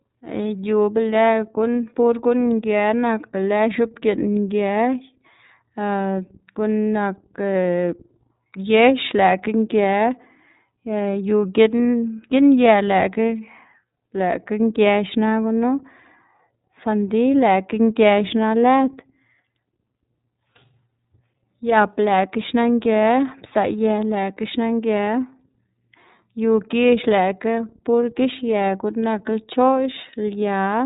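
Speech runs through the iLBC codec from start to finish: nothing passes above about 3.8 kHz, and the voice sounds plainly rough and synthetic. Unlike a plain low-pass filter or clean G.711 telephone audio, this coarse texture fits iLBC's 30 ms frames at 13.33 kbps.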